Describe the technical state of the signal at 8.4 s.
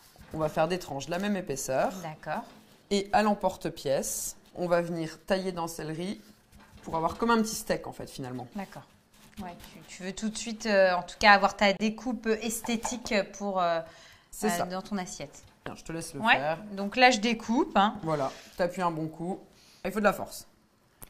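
At 8.41 to 8.43 s there's a corrupt frame decoded: a couple of frames carried flipped bits, so misread gains produce a brief chirpy blip peaking around -30 dBFS.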